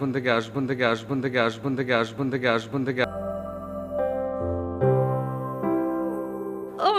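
From 0.55 to 3.04 s, a 0.54 s fragment repeats five times back to back, a broken-record loop, likely a stalled player resending its last buffer, losing the intended audio.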